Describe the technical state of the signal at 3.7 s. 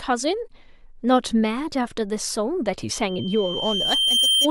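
At 3.7 s you're right in the middle of a loudspeaker feedback squeal that runs from about 2.92 s to 4.49 s. The mic is hearing its own speaker, and around 3.1 kHz the loop gain tops one, so that single tone keeps feeding itself. It swells over roughly a second and a half, so at 3.7 s it's still building toward a whistle sitting about 5 dB above the speech.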